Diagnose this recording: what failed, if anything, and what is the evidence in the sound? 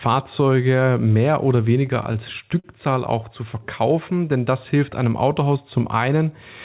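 The failure sits in the network and jitter-buffer stage: packets arrived late or too slowly, so the buffer repeatedly ran dry and the receiver stretched the last sound to cover each wait. Between 1.86 and 2.66 s, right after "mehr oder" and before "auch zu verkaufen denn", this produces repeated stalls (stutter): nine short hitches, the longest about 43 ms, adding 121 ms of filler, so the phrase drags. Nothing is lost. The telephone-band sound, with nothing above 4 kHz, fits a G.711 call.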